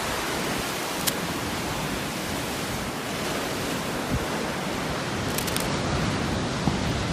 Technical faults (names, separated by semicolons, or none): cable scratch noise